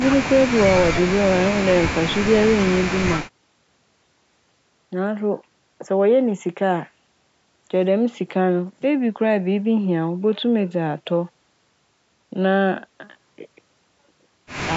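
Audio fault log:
No fault turns up anywhere in this speech clip. The call microphone processing is audible as a trimmed low bass, which is normal for that path.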